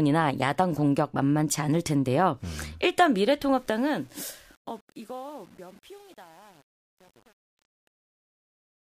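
From 3.57 s to the end of the speech, the fade-out suffers truncation distortion at 8 bits without dither, turning gritty from 3.99 s onward.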